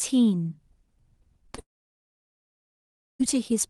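Around 1.47 to 1.50 s, 1.52 to 1.55 s and 1.55 to 1.60 s there's a quick run of short concealed packet losses: each time roughly 20 ms of audio went missing, and the receiver bridged it by extending the last sound, so you get little smears and wobbles.

Right after, from 1.60 s to 3.21 s, the sound briefly buzzes on and then goes almost completely silent for about 1.6 s before picking up again further along, with that whole stretch simply gone. That's most likely a long network dropout, where nothing arrived at all.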